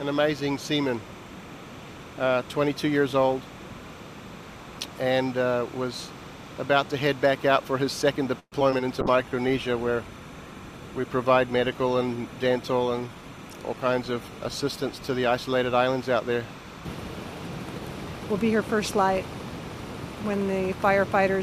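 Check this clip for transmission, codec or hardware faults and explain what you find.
Four kinds of fault are audible: continuous timecode bleed, a brief burst of repeated packet loss, a long call bitrate drop, and two jitter buffer adjustments, one slowing and one speeding the audio.

Timecode bleed (throughout): A steady chirping warble sits well below the main sound for the whole clip, flipping between tones near 1 and 2 kHz. Linear timecode from an adjacent track or cable has leaked in. The switching rate fits 30 frames-per-second code.

Repeated packet loss, robotic sound (8.39 to 8.81 s): The sound turns choppy and metallic, with pieces missing. Packets went missing several times in quick succession, the longest hole about 124 ms. Each gap was patched by extending the previous sound, so roughly a third of this stretch is filler.

Call bitrate drop (9.02 to 16.90 s): The audio becomes coarser and duller, losing its top end for about 5.7 s at its worst. 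The call's bandwidth estimate fell, forcing the encoder to far fewer bits, which fits a drop from around 128 to 24 kbps.

Jitter buffer slow-down (9.11 to 9.31 s): The sound drags briefly at unchanged pitch, running at 86% speed. The receiver's buffer was short, so it repeated small slices of audio to rebuild a reserve, adding about 35 ms.

Jitter buffer speed-up (12.72 to 13.81 s): The sound hurries at unchanged pitch, running at 111% speed. Too much audio had piled up in the buffer, so the receiver trimmed short pitch-period fragments repeatedly, cutting roughly 150 ms to reduce delay.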